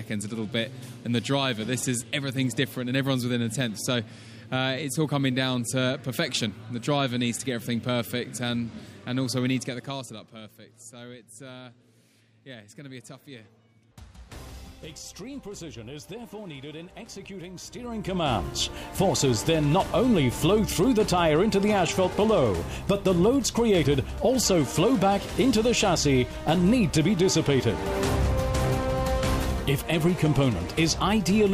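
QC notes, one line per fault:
9.44–10.64 s, zipper noise: the level falls roughly 15 dB in unsmoothed 1 dB steps, about 30 per second. Each step leaves a small click, so the fade ticks audibly. Waveform shows a staircase envelope; spectrogram shows faint vertical broadband lines at each step.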